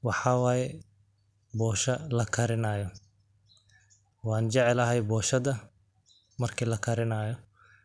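No technical faults can be heard anywhere in this speech recording. Nothing in the audio calls for comment at any point.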